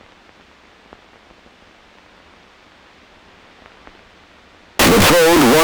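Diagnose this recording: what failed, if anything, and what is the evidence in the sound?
From 4.79 s to the end at 5.63 s the sound jumps to a very loud, harsh, almost square waveform at an almost fixed, high level, with background noise as loud as the main sound, though pitch can still be followed. This is a sample-format conversion fault, likely float read as integer: 32-bit float samples interpreted as 32-bit integers, so sign and exponent bits dictate amplitude. Unlike ordinary clipping, the level is fixed regardless of input loudness and quiet passages are raised too.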